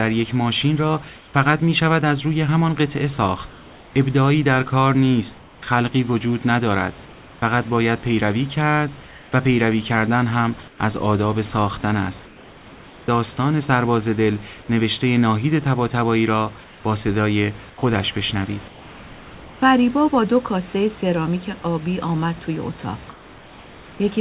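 Likely discontinuous transmission at the sender, so the receiver fills pauses with comfort noise in place of the background at 1.16, 3.5, 5.38, 9.08, 10.68, 12.26, 16.64 and 23.12 s. The room noise turns steady and featureless, usually about 1 to 6 dB quieter.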